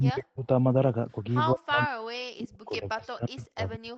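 Speech suppressed in double talk, from 0.00 to 0.48 s and again from 1.52 s to the end at 3.97 s: the voice drops sharply, by as much as about 40 dB, likely because an echo canceller mistook it for loudspeaker echo while both sides spoke.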